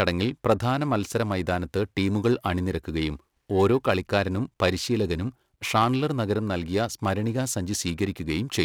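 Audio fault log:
Throughout: periodic clock jitter. Interference is modulating the converter's sample clock at a steady rate of around 1.5 kHz, so each sample is taken slightly early or late in a repeating cycle. That timing wobble folds sidebands onto every frequency in the speech, spaced about 1.5 kHz above and below it, and the higher components are hit hardest. The result is a gritty, metallic edge riding on the speech that disappears in the pauses.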